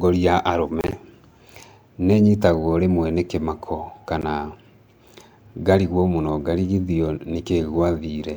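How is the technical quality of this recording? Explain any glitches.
The speech is interrupted twice by brief gaps, likely a Bluetooth dropout: delayed packets were discarded, muting output. From 0.81 to 0.93 s, about 58 ms vanishes in short holes up to 29 ms; at 4.22 s, a single 14.5 ms gap. Speech resumes later, skipping ahead.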